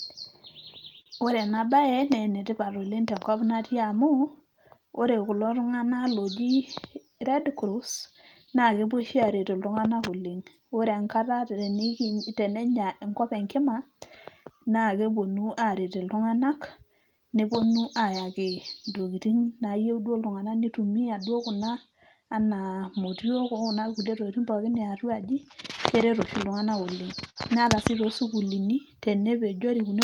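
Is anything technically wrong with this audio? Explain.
Yes. The speech has several timing faults.

Clock drift between sender and receiver runs through the whole clip. The sender's clock is about 5 percent slower than the receiver's. The jitter buffer keeps running low. Small timing hiccups recur, unevenly spaced, from start to finish.

Repeated timing corrections span 0.32 to 29.82 s. To make up the shortfall, the receiver keeps repeating short pieces. Playback runs at 96 percent speed, adding roughly a second overall. The result is a slightly dragging, unsteady tempo with faint hiccups.

A short stall from a late packet occurs at 1.01 to 1.08 s. A packet arrived late, and the buffer ran empty. The receiver held the last sound for 48 ms, then carried on. Nothing is lost, but one sound lingers with a slight buzz or dip.

Scattered short gaps appear at 8.21 to 8.65 s and at 25.76 to 27.38 s. 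Isolated packets were lost or late. The receiver bridged each hole by continuing the last sound. The first stretch has about three tiny patches. The second has about four, the longest about 50 ms. They are heard as brief ticks and smears.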